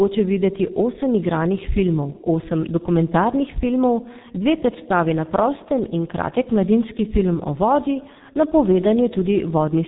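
Throughout the speech, G.723.1 codec damage is heavy: nothing passes above 3.8 kHz, and the slowly updated 30 ms voice model leaves a hoarse, muffled tone with smeared consonants, consistent with a bitrate near 6 kbit/s. Unlike simple band-limiting, the roughness itself is coded in.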